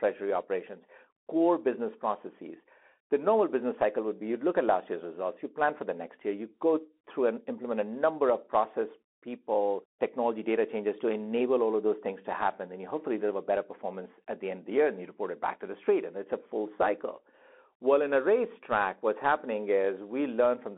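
A speech recording run through a Bluetooth CVSD headset codec for its whole length, with audible damage. It's squeezed to roughly 250 Hz to 3.4 kHz with nothing above 3.8 kHz, and the one-bit slope tracking, which fits a 64 kbps link, leaves scratchy sibilants and a grainy hiss underneath.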